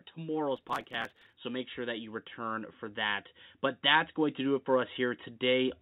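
Speech, with two faults. From 0.15 s to the end, automatic gain rising lifts the voice and background together in a slow swell. From 0.57 s to 1.36 s there is processor overload crackle. The gritty tearing comes from many tiny skips, which suggests very short buffers of a millisecond or two being dropped in a long run. All of this sits on a narrowband call sound with nothing above 4 kHz.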